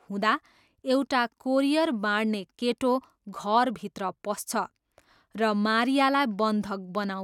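No technical faults are audible.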